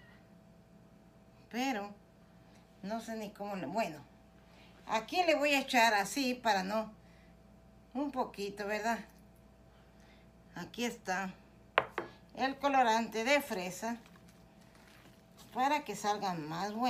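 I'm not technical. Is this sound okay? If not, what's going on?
Yes, it sounds fine: nothing stands out as broken, and there are no dropouts, crackles or glitches anywhere in it.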